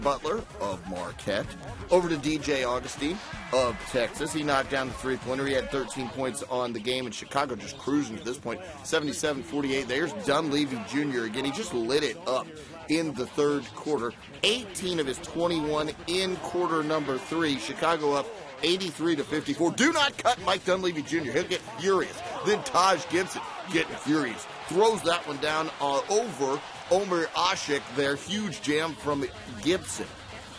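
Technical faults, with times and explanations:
No technical faults can be heard anywhere in the audio, and the signal stays steady and intact throughout.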